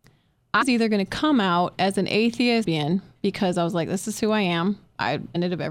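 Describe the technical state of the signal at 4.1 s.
At 4.1 s the speech signal is intact, with no technical fault present at that moment.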